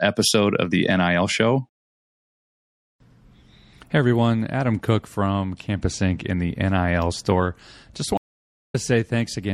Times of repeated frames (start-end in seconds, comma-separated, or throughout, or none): none